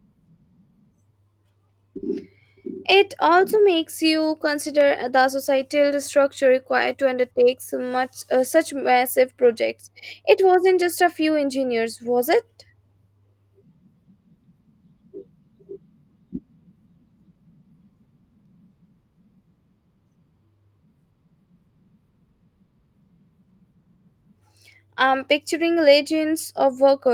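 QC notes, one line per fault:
No faults heard anywhere in this speech recording.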